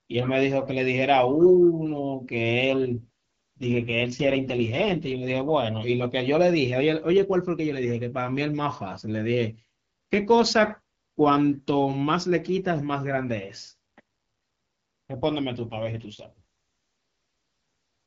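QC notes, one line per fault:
2.66 to 5.54 s and 15.56 to 16.30 s: AMR rate drop. The speech turns rough, buzzy and synthetic, which fits the AMR-WB codec stepping down from 12.65 to 6.6 kbit/s. Unlike a bandwidth cut or a dropout, the audio band stays the same, with no gap.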